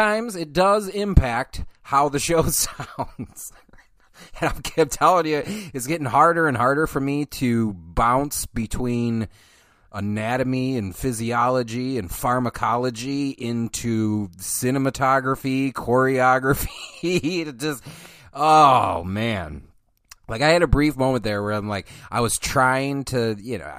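No technical faults can be heard anywhere in the recording; the signal stays intact and continuous throughout.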